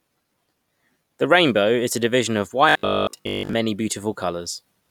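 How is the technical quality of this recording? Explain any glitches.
Robotic sound from repeated short buffers runs from 2.69 to 3.53 s, right after "a division of". The speech there collapses into a rigid, metallic buzz at 50 Hz that still loosely traces the words. The likely cause is audio arriving too seldom, so the playback keeps looping the last chunk, about 20 ms long given that 50 Hz pitch, while fresh audio is dropped. Most of that stretch is repeated material rather than new sound.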